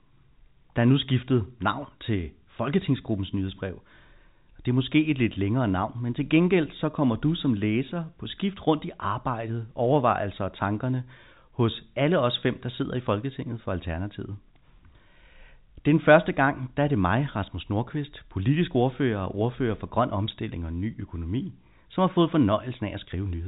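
No faults heard; the speech is carried in G.711 telephone coding with nothing above 3.8 kHz, as expected for that path.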